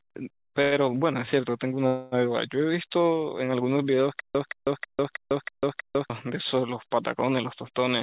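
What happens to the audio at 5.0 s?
From 4.20 to 6.10 s, a 0.18 s speech burst repeats six times every 0.32 s with silence between: stutter with silent gaps, likely a stalled stream replaying its last fragment.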